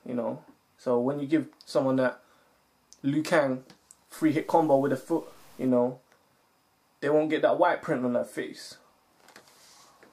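From 4.19 to 5.69 s the audio turns grainy and rough, with a distortion that rises and falls with the sound itself and sputters on the quietest parts. This is likely low bit depth without dither, with the signal truncated to a coarse grid that fits 8-bit resolution, leaving error only around 35 dB below the signal. On a waveform the quiet stretches look stair-stepped; a spectrogram shows a signal-following haze of broadband grit across that span.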